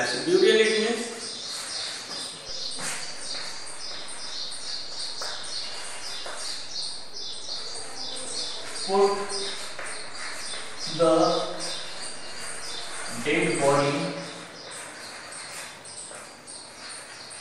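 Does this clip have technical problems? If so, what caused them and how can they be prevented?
Yes, there's a DC step: at 2.49 s the waveform's zero line jumps by about -35 dBFS, giving a low thump, then holds offset until it drops back at 13.82 s with a second thump. The audio itself carries on unchanged. A high-pass or DC-blocking filter ahead of the converter would stop it.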